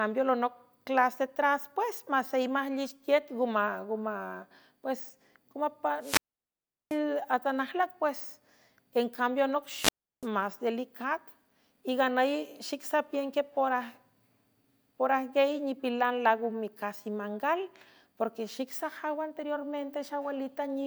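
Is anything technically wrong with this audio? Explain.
Yes. A wireless microphone squelch dropout occurs at 5.99–6.99 s and 9.74–10.28 s, just after "encambia anoc". The FM radio link fades, so the receiver's squelch mutes the output. Each time there is a brief rise of hiss, then near silence for 0.74 s and 0.34 s, before the speech returns.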